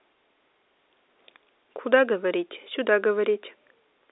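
No technical faults can be heard in the speech, which comes through on an ordinary telephone line.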